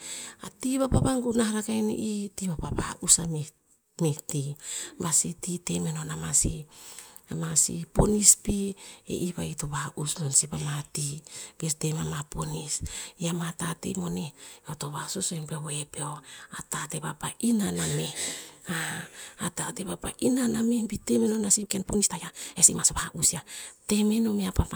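From 21.48 to 23.46 s the speech suddenly rushes ahead at about 1.6 times its normal pace while the pitch stays put. This time-stretched section was likely squeezed by software that drops short slices of audio to shorten it without changing pitch.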